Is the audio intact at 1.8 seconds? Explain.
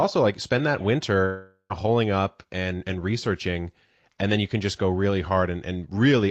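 No, 1.8 seconds falls inside a long network dropout running from 1.25 to 1.86 s, between "like spend that" and "up and and researching". Audio likely stopped arriving, so the receiver stretched the last sound into a fading buzz before a short silence, and the lost piece never returns.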